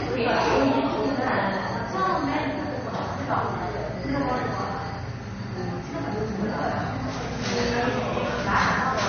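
Likely MP3 compression, throughout: nothing above 6.5 kHz survives, and faint frequency lines flicker between frames, giving plainly audible watery swirl, consistent with roughly 32 kbps encoding.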